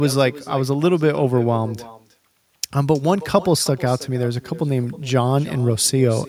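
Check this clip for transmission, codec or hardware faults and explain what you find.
One fault runs through the whole speech clip. Echo with no canceller, present from start to end: the far end plays the call through a loudspeaker, its microphone picks that sound back up, and nothing strips it out, so the talker's own speech returns after the network round trip. Each phrase is trailed, roughly a third of a second later, by a thinner copy sitting about 18 dB below the direct speech, giving a persistent doubled, shadowed quality.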